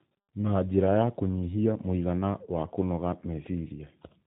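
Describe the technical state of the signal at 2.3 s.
At 2.3 s the speech carries tandem speech coding, present across the whole clip rather than at that instant alone. The sound points to two speech codecs in a row, fitting a CVSD link passed through G.711 A-law and then re-coded as G.729A, each stage working on the previous one's damage. It sounds rough, muffled and warbly. A spectrogram shows a hard ceiling with nothing above 3.8 kHz and smeared, wavering formant bands.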